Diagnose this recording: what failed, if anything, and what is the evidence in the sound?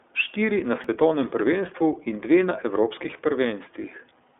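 The codec stage is at fault for the whole clip. The speech has been through the iLBC codec, and the damage is plainly audible: a rough, slightly synthetic texture on the voice, with nothing above 3.8 kHz and a line band of roughly 250 Hz to 3.6 kHz. iLBC codes each 30 ms frame's excitation independently of the previous frame, which fits its 13.33 kbps mode. The coarse excitation modelling produces the grainy quality.

The driver or buffer stage produced a repeated buffer at 0.84 s, just before "prvenstvu in". The device ran short of fresh samples and replayed its last block twice more, creating hard joins that sound like a brief click or buzz rather than a stutter. The 1.33 ms repeat length fits a 64-sample buffer. Because the repeats were inserted rather than substituted, no audio appears to be lost.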